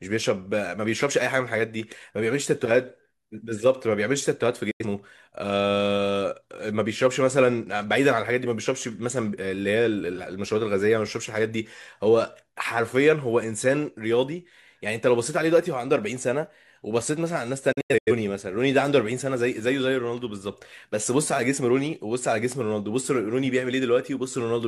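At 4.71 s the speech drops out in a digital broadcast dropout lasting until 4.85 s. The receiver muted after losing or rejecting frames, with an 8 ms fade into silence and 85.3 ms of audio gone, which fits two lost frames. At 17.72 s a second dropout breaks up the sound until 18.12 s. There, 213.3 ms vanishes in several short holes spread over 341.3 ms, the longest 85.3 ms. This points to about five failed frames.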